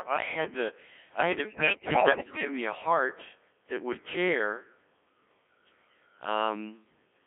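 What you've got here is speech pushed through a Codec 2 vocoder for the whole clip. The thin, buzzy, robotic character and the narrow band of roughly 300 Hz to 3.5 kHz point to one of its lowest-rate modes, something like 1.3 kbit/s. At that rate the decoder isn't rebuilding the waveform at all, just resynthesising from pitch, voicing, energy and a coarse envelope, so the damage is heavy and constant. Then from 1.45 s to about 2.45 s you get bit errors on digital voice radio. For that second or so the voice lurches in pitch and loudness and its tone colour keeps flipping, collapsing into warbly, bleepy gibberish across 24 frames. That's what you'd expect when a big share of the bits, something on the order of one in five, arrive corrupted, because at this rate each bit steers the pitch, level or spectrum of an entire frame.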